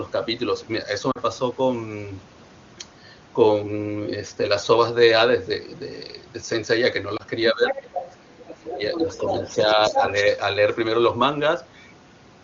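Right at 1.11 to 1.18 s there's a short drop toward near silence, about 40 ms, which fits two lost AMR speech frames. The decoder papered over the gap by repeating the last good pitch and vocal tract settings at falling gain. A single-frame version hits at 7.17 s.

From 7.51 s things get messier. The talker's speech is suppressed in double talk, most likely because the echo canceller couldn't tell the talker from the loudspeaker echo and clamped down on both. The sound dips by roughly 15 dB from 7.51 to 7.94 s and again from 8.23 to 9.21 s, then by a milder few dB from 9.42 to 10.13 s.

Overlapping those dips, the other side's voice is leaking through at 7.69 to 8.17 s, 8.93 to 9.65 s and 9.85 to 10.38 s. It's likely residual echo that the canceller didn't fully remove. It sits roughly 10 dB under the main speech at first, then closer to 5 dB under. The wideband coding itself stays clean and full, which fits a high 23.85 kbit/s AMR-WB mode.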